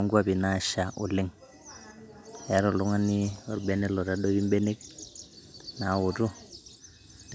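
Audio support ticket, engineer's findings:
Faint delayed copy of the speech at 2.16–2.48 s, 6.69–6.78 s and 7.01–7.3 s. Trails the original by about 245–255 ms, about 25–35 dB down. Likely echo leak: the loudspeaker end's echo canceller let residual pickup through and sent it back.

Room background drops out at 6.49–6.64 s, about 150 ms in total. Dip of about 38 dB, then recovers. Background gated by the echo canceller: the microphone was pulled down hard while the loudspeaker played, then released.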